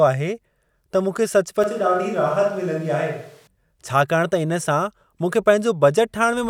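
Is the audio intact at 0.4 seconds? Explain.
Yes, at 0.4 seconds the speech plays through intact, with no dropout, click, distortion or other fault at that moment.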